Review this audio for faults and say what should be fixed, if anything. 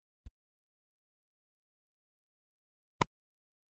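Throughout the clip, from 0.0 to 3.7 s, the speech pumps down in level and thins out, at its deepest sinking by roughly 40 dB, so it fades or breaks into fragments rather than holding steady. This is speech suppressed in double talk, likely caused by the echo canceller hearing both sides at once, failing to tell the near talker from the loudspeaker echo, and attenuating everything. Preventing it means using an echo canceller with proper double-talk detection, or headphones so there is no acoustic echo to fight.

At 3.00 to 3.05 s a brief, faint scrap of a second voice slips in, only about 35 dB below the speech, a short fragment rather than a sustained intrusion. This is the other side's voice leaking through, likely residual loudspeaker echo that the canceller did not fully remove from the microphone signal. Preventing it means lowering the loudspeaker level, improving echo-canceller convergence, or having the talker wear headphones. 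The Opus call path, at a bitrate that fits 32 kbps, limits everything to below 8 kHz, which accounts for the missing top end in both voices.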